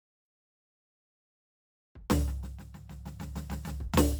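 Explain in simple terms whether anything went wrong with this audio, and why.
Nothing went wrong here.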